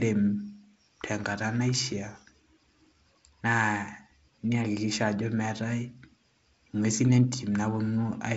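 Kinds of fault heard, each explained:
No faults are heard in this speech recording.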